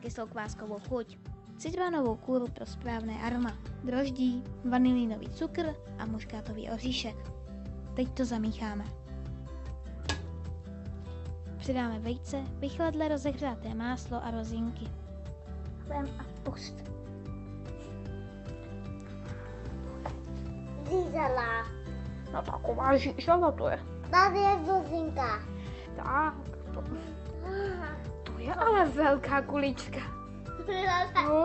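No technical faults can be heard anywhere in this recording.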